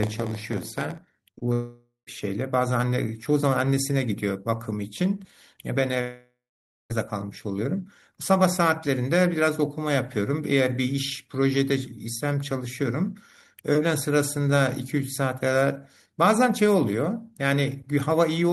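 From the start to 0.98 s there is a block size mismatch (padded): one stage hands over blocks shorter than the next stage reads, which fits 512-sample reads, and the shortfall in each block is filled with zeros. That puts a tiny gap in every block, heard as a buzz at 86.1 Hz laid over the speech, and the opening runs at 0.938 times normal speed while keeping roughly its normal pitch.

Next come three short concealed packet losses back to back, at 1.31, 1.35 and 1.39 s. In each, about 20 ms of the call failed to reach the decoder in time, and the receiver covered the hole by extending the preceding sound before blending back into real audio. Strung together, they make a quick smeared wobble lasting about a tenth of a second.

At 1.53 s a long network dropout begins, likely from audio ceasing to arrive for over half a second. The receiver keeps the last sound going as a fading buzz or hiss for most of that stretch, then about 0.12 s of silence follows before the audio resumes at 2.09 s with the missing part gone. 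A second dropout, from 6.01 to 6.92 s, is likely caused the same way: about 0.9 s is lost, the filled sound decays, and roughly half a second of silence precedes the return.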